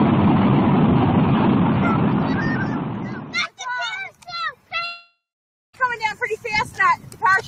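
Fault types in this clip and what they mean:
Noise suppressor applied to music or sounds: a speech-tuned suppressor treats sustained tones and tails as noise, so the sound pumps and thins, with levels swinging around 10 dB.
Long network dropout: around 4.85 s the sound smears into a fading buzz, then about half a second of silence before returning at 5.75 s, likely lost packets.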